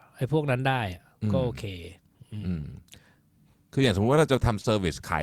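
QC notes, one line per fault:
2.61–2.65 s and 4.61–4.66 s: short concealed packet loss, twice. Each time about 20 ms of speech missed the decoder, so the receiver extended the preceding sound, pitch-based if voiced, shaped noise if not, then blended back, leaving a brief smear.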